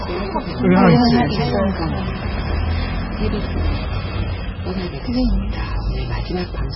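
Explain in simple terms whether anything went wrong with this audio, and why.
Heavy MP3 compression likely caused this: throughout, everything above 5.6 kHz is missing, leaving the sound dull, watery and swirly, with smeared attacks.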